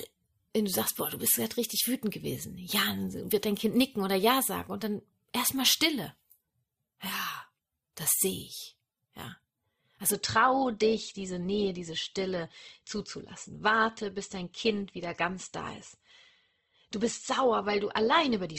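Speech where an adaptive stream switches to a lower bitrate from 10.12 s onward, so treble abruptly stops near 8.2 kHz and codec artefacts thicken, with no gap.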